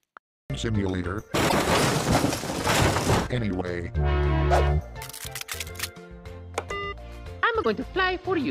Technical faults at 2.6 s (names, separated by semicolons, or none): none